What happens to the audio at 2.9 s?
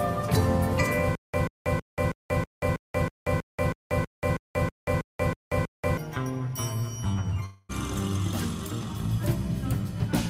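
Stutter with silent gaps, from 1.15 to 5.97 s: a likely playback stall replays one 136 ms burst fifteen times, each followed by 185 ms of digital silence.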